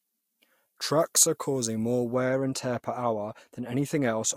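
From the start to 2.14 s the speech sounds thin, bright and sibilant, with the treble lifted by about 11 dB at 10 kHz against 1 kHz. This is pre-emphasis left on: a boost matching the 50 µs FM curve was applied, but the complementary de-emphasis cut never followed.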